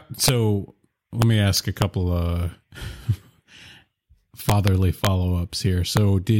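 Integer overflow cracks this speech clip at 0.24–0.29 s, 1.22–1.82 s, 4.49–4.68 s, 5.05–5.07 s and 5.97 s. On the loudest passages the signal is pushed about 2 to 3 dB past the largest representable value, reaching the limit at 5.97 s. The integer arithmetic wraps instead of saturating, so each overshooting peak jumps to the opposite extreme of the range, producing harsh, violent cracks far sharper than ordinary clipping.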